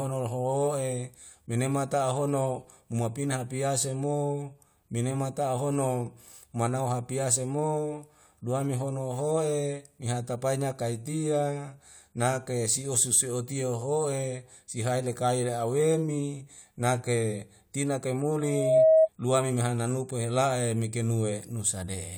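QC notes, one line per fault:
18.4–19.09 s, loudspeaker feedback squeal: after "la awemi nake tina", one 638 Hz tone swells over roughly 0.4 s to about 10 dB above the speech. It ends before "lua meme hana nupe". The microphone hears its own loudspeaker. Loop gain at 638 Hz exceeds one.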